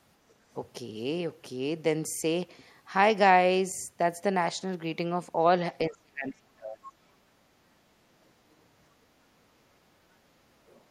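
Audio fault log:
0.29 to 0.34 s, other side's voice leaking through: a faint scrap of a second voice, around 40 dB below the main speech and only about 50 ms long, slips in near the start. It is likely residual echo: the far end's audio played from the talker's loudspeaker reached the microphone, and the echo canceller left a trace of it.
5.89 to 6.94 s, speech suppressed in double talk: the talker's speech sinks sharply for roughly a second, dropping by as much as about 35 dB at its deepest, so stretches of it fade or break away. The likely cause is both sides talking at once. The echo canceller could not tell the local talker from the loudspeaker echo, so it turned the whole microphone signal down, taking the wanted speech with it.
10.67 to 10.81 s, other side's voice leaking through: near the end, a brief fragment of the other voice, about 140 ms long and roughly 35 dB under the speech, comes through again. 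It is a little stronger than the first leak. This points to the likely cause being the same incomplete cancellation of the loudspeaker signal at the microphone.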